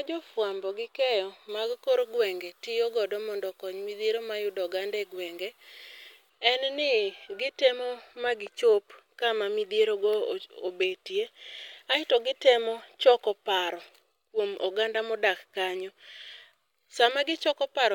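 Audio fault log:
1.49–6.30 s, pre-emphasis left on: the speech turns thin, bright and sibilant because treble boosted along an FM 50 µs curve was never cut back, leaving 10 kHz about 11 dB hot relative to 1 kHz.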